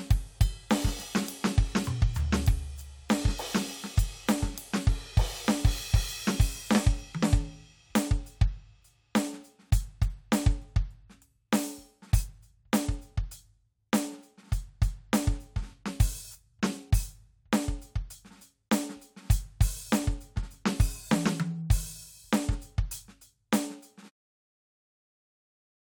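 No technical faults can be heard in this music. Near the end, at about 24 s, the level fades out smoothly by 24.11 s, as an editor would shape it.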